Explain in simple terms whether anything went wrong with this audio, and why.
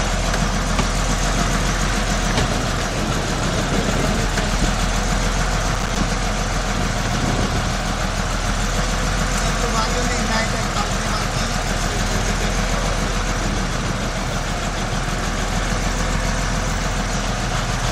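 At 5.69 to 5.96 s there is processor overload crackle. The computer fell behind and missed around ten tiny chunks of audio, leaving brief silent gaps that crackle.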